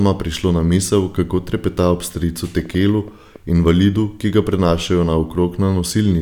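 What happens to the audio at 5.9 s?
At 5.9 s the audio is intact, with no dropout, click or other fault at that point.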